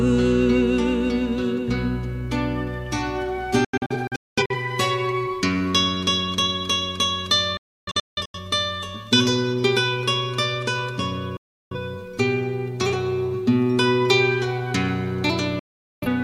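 Digital broadcast dropouts strike at 3.65, 7.57, 11.37 and 15.59 s. The receiver mutes when frames fail, fading out within 3 ms. The first two break into several short holes. The longest single gap lasts 0.43 s. The missing sound is lost.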